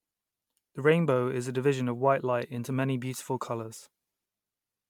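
Throughout the speech, swirly, hollow smearing and blurred attacks mark generation loss, likely from about seven MP3 passes; one encode at this quality would sound cleaner.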